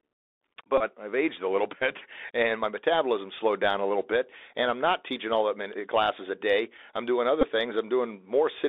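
A muffled, telephone-narrow sound with scratchy sibilants and a granular hiss runs throughout, the mark of the Bluetooth CVSD headset codec, its one-bit 64 kbps delta coding confining everything to roughly 300 Hz to 3.7 kHz. From 0.78 to 0.82 s, just before "I've aged a little", a brief buzz near 267 Hz appears: a Bluetooth headset packet repeated, the last packet replayed every 3.75 ms across about 26 ms of loss, which fits around seven missing packets. The same buzz returns from 7.41 to 7.47 s, right after "a day I'm doing", covering about 15 ms of loss, consistent with four repeated packets.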